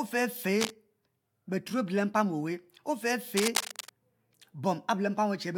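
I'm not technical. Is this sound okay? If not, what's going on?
No. A worn cable or connector was likely being moved, so the electrical contact kept flickering between good and poor. That is cable scratch noise. You hear it as scratchy, rustling bursts laid over the speech, from about 0.54 to 0.70 seconds and again from 3.37 to 3.89 seconds. The second burst lasts about half a second. Both are fairly loud, not far below the speech itself, so they are easy to notice.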